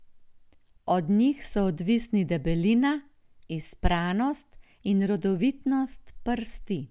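No faults turn up anywhere in this recording: no dropouts, glitches, distortion or timing disruptions to report.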